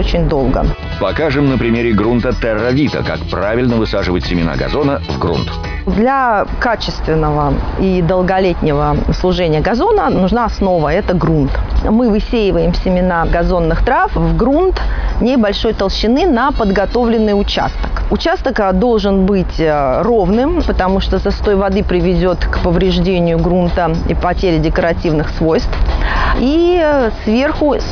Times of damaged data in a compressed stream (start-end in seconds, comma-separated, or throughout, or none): none